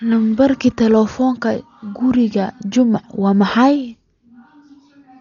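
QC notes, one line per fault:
Throughout: likely Dolby Digital compression. The speech is dull with nothing above 7 kHz, and a rough, fluttering noise clings to tonal parts, heavy damage consistent with a starved bitrate near 40 kbps, where many frequency lines get no mantissa bits and are refilled with dither noise.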